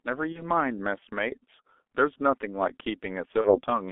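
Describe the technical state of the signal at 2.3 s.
At 2.3 s the speech runs through a G.723.1 codec, present for the whole clip. Its 30 ms frames, heavy damage, about 6 kbit/s and narrow 3.5 kHz ceiling leave the speech muffled, hoarse and blurred.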